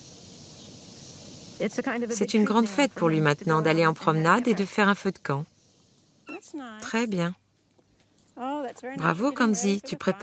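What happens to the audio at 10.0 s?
Nothing goes wrong at 10.0 s: the sound carries on intact through that moment, with no dropout, click or distortion, only the usual band-limiting to about 8 kHz from the call path.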